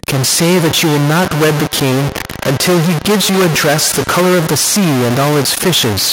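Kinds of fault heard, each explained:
Stuck bit: Distortion rides on the speech for the whole clip, and the pauses are filled with a gritty noise floor rather than silence. The likely cause is one data bit held fixed by a faulty line or converter, so values near zero flip with their sign. On a waveform the quiet stretches show a constant offset-like jitter; a spectrogram shows broadband hash spread evenly across time.
Feedback echo between two devices: From 0.4 to 4.56 s the speech comes back at a fixed delay of roughly 150 ms. It peaks about 16 dB below the direct sound. A second device in the same room is replaying one microphone's signal into another, and each device's echo canceller removes only its own playback. A spectrogram shows faint copies of each syllable's harmonics shifted right at that spacing. The waveform shows smaller trailing bursts after each word.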